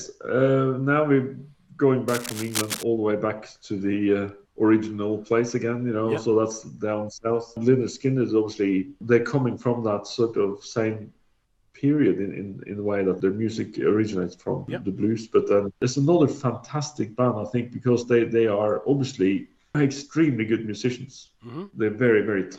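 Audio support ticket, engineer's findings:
Cable scratch noise, 2.08 to 2.83 s. Dense, irregular crackle and rustle over the sound for about three quarters of a second, roughly 10 dB below the programme level. Likely cause: worn cable, connector or control being moved, with contact resistance fluctuating rapidly and modulating the signal path into bursts of noise. Suggest reseating or replacing the suspect lead or jack.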